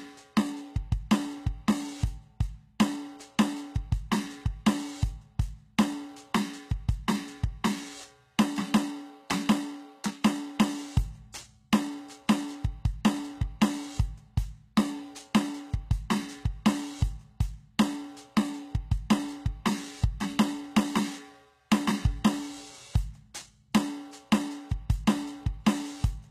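A music recording, with a coarse, synthetic-sounding treble throughout. The top octave is bright but does not belong to the instruments below it: harmonics fail to line up above the crossover, and cymbals turn gritty and metallic. That points to HE-AAC compression, likely at a very low bitrate around 20 kbps. Spectral band replication is copying lower bands upward under a rough envelope rather than coding the real high frequencies. A plain low-pass or ordinary low-rate AAC would instead sound dull or swirly, not falsely bright. Single sharp clicks sit at 5.93, 17.02 and 21.50 s, each a thin vertical line across the spectrum. These are likely dropped samples, a fraction of a millisecond missing, so the waveform jumps abruptly to a later value. Unlike a dropout, no sound goes silent or missing, and unlike clipping, the clicks are isolated rather than tied to loud peaks.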